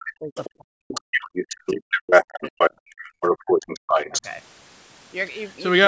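From 0.0 to 0.36 s and again from 0.54 to 3.92 s the speech is suppressed in double talk, dipping by up to about 40 dB. The likely cause is an echo canceller ducking both voices at once.

The other side's voice is leaking through at 0.35–0.5 s (about 15 dB below the speech), at 0.88–2.25 s (about level with it), at 2.41–2.71 s and 3.21–4.29 s (about 5 dB above), and faintly at 2.9–2.94 s. This is likely residual loudspeaker echo: a second voice rather than a repeat of the talker.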